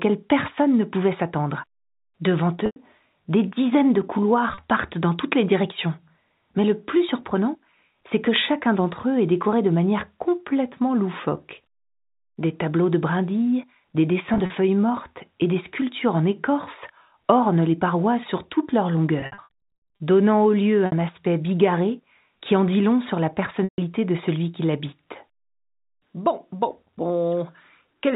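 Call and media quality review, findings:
Packet loss with pitch repetition, six events: 2.66–2.76 s (100 ms), 4.54–4.58 s (40 ms), 14.34–14.50 s (80 ms scattered over 160 ms), 19.2–20.0 s (460 ms scattered, runs up to 80 ms), 20.86–20.92 s (60 ms), 23.64–23.78 s (140 ms). Symptom: held, buzzy tone, longer gaps fading to silence. Probable component: jitter buffer/PLC repeating the last pitch period, gaps fitting 20 ms packets. Spectrogram: frozen harmonic bands; waveform: identical repeated cycles decaying. Narrowband G.711 A-law path, nothing above 4 kHz.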